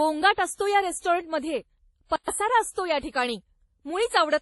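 Transcoding between lossy codecs runs throughout: nothing reaches above 11.5 kHz, and layered smearing suggests a low-bitrate MP3 likely re-encoded to WMA, each pass adding artefacts.

A playback stall at 2.16 to 2.28 s, after "असतो या रेस्टॉरंटमध्ये", drops the speech for 120 ms because the player likely starved, then resumes with "असतो या ठिकाणी".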